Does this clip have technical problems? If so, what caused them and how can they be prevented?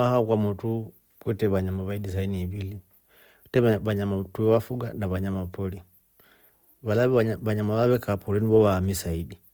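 Yes. Opus compression affects the whole clip: the speech sounds rough, grainy and noisy, and the damage is plainly audible. The likely cause is Opus in its music (CELT) mode at a bitrate that fits about 24 kbps. Short of bits, it keeps each band's energy but fills the detail with folded or noise-like content, so tones turn gritty even though the band still reaches 20.3 kHz. Encoding at a higher bitrate would prevent it.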